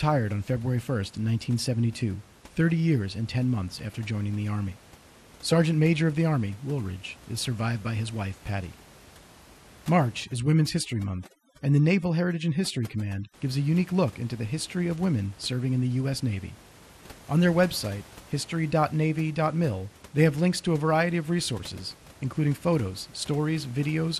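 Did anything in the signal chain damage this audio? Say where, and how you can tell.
Yes, two things. At the codec stage, the whole clip sounds dull, with a gurgling, granular grit and the top end flickering in and out. That's what you hear when sub-bands get starved of bits and switched off, so it's likely MP2 compression at a low rate, something like 80 kbps.

In call processing, from 10.24 to 13.34 s, there's overdone noise removal. The room noise, normally sitting about 25 dB under the speech, drops away and breaks up into twinkling specks, and quiet parts of the speech go with it as bands near the noise estimate get gated away.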